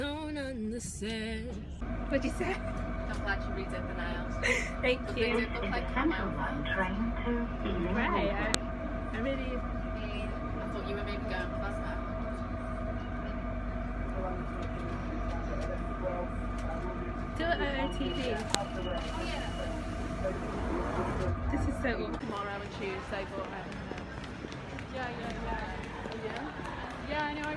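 Audio pieces about 10 s long were joined or streamed with each piece's WAV header still attached, so the header bytes were played back as if they were samples. That header data bears no relation to the waveform around it, and it produces a file header played as audio: a sharp, loud click or snap at 8.54 s and again at 18.55 s. Each click marks the start of a new piece and cuts through whatever the sound is doing at that moment.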